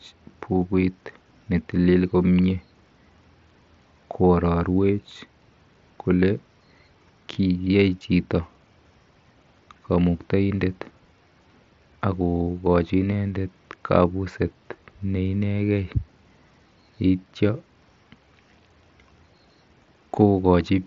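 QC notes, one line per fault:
No faults found; the speech runs over the Bluetooth mSBC headset codec as intended, with its top end stopping near 7.7 kHz as that wideband link does.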